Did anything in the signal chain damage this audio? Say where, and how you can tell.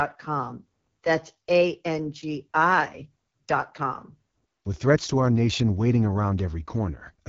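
Yes, the codec stage. The whole speech clip has the rough, raspy texture of AMR wideband (HD Voice) coding at a low rate, with nothing above 7.5 kHz. That points to one of the lowest AMR-WB modes, something like 8.85 kbit/s, where the pulse-driven vocal tract model runs short of bits.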